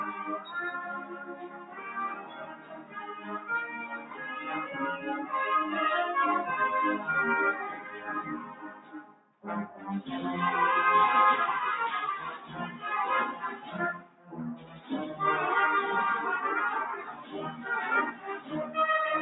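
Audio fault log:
Throughout: noise suppressor applied to music or sounds. A speech-oriented suppressor stays active across the whole clip and keeps reclassifying sustained and ambient parts of the sound as noise, so the level swings by around 15 dB as gain is pulled down and released. That constant up-and-down pumping, with onsets surviving while held material and decays thin out, separates it from a plain level drop or fade. The call microphone path's band limit, with nothing above 8 kHz, is a separate effect.
0.95–4.2 s, 7.75–9.87 s, 12.38–12.84 s, 13.34–14.9 s, 17.1–17.33 s, 18.13–18.51 s: sound cut by the noise suppressor. In these stretches the suppressor clamps harder on particular sounds, sinking them by up to about 10 dB (about 8, 7 and 9 dB in the three shorter spans) and truncating their tails. The longest is around three seconds of affected audio in the first span. Unlike a dropout, the sound never vanishes and attacks still come through. 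Steady or fading content dips most.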